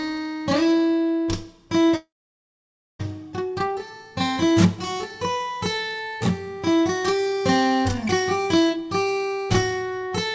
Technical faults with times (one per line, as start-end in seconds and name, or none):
1.96-3.01 long network dropout